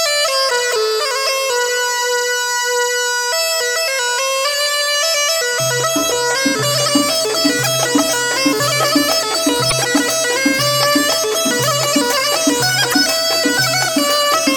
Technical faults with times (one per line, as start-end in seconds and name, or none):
0.69-0.74 damaged data in a compressed stream
9.68-9.72 damaged data in a compressed stream
12.89-12.94 damaged data in a compressed stream